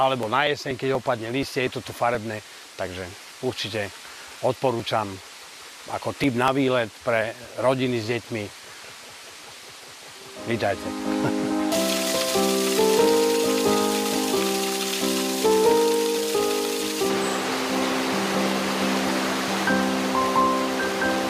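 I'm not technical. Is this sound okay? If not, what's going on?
No. From 0.23 s to 6.48 s there are periodic USB or driver dropouts: a steady tick every 0.24 s, around thirty in all. Something else running on the computer keeps briefly stalling the link to the audio hardware at a fixed rhythm. Each time, a sliver of sound, about 10 ms, is skipped entirely, and the sudden jump is heard as a click wherever sound is playing.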